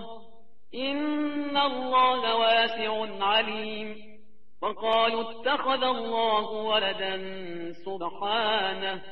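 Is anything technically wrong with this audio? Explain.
Yes. A DC offset of about -39 dBFS runs throughout. The entire waveform sits on a constant shift from zero, so the trace is visibly off-centre, and a spectrogram shows a steady band at 0 Hz. It is inaudible itself but eats headroom.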